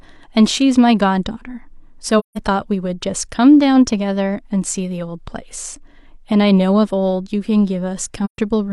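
Speech with two soft-edged gaps from AAC frame loss with muting. The first runs from 2.19 to 2.38 s, the second from 8.24 to 8.39 s. The missing stretches last about 171 ms and 128 ms, which fits four and three lost frames. The decoder zeroed the spectrum for those frames. The overlapping windows then fade the sound out and back in, so each hole has gentle edges.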